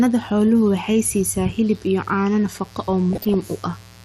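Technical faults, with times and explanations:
Throughout, mains buzz: a steady, raspy buzz sits under the speech, roughly 30 dB below it. Sharp switching spikes on the 60 Hz mains, twice per cycle, leak into the signal, and their harmonics stretch up to several kHz, giving the rasp.
Throughout, MP2 compression: the speech sounds dull, with gurgling, granular distortion and upper frequencies flickering in and out. The likely cause is MPEG Layer II coding with too few bits, consistent with a low rate near 80 kbps, so upper sub-bands drop out.
3.13 to 3.34 s, DAB burbling: a burst of short noise blips rides over the speech for about 0.2 s. This points to weak reception letting through roughly half a percent of bit errors, so wrong samples put short blips of noise into individual sub-bands.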